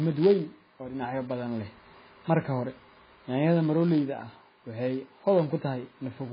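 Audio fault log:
throughout, block size mismatch (padded): a steady buzz at 91.5 Hz, because every block ends in a short run of zeros. The waveform shows regular flat dropouts to silence. The spectrogram shows thin vertical gaps and harmonics stacked at 91.5 Hz spacing. The speech runs slightly slow (0.996x) at about its normal pitch.
throughout, MP3 compression: heavy watery, swirling damage with smeared attacks and nothing above 5 kHz. The spectrogram shows a hard ceiling at 5 kHz and patchy time-frequency holes that flicker frame to frame. This likely comes from MP3 encoding at a very low bitrate, around 16 kbps.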